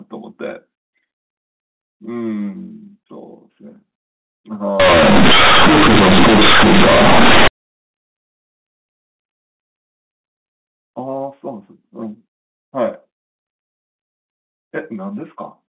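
Telephone speech in G.711 mu-law, band-limited to 4 kHz. From 4.80 to 7.48 s the companded audio is read as linear: unexpanded mu-law bytes cause harsh buzz, a waveform bent out of shape, and broadband spectrogram noise filling pauses.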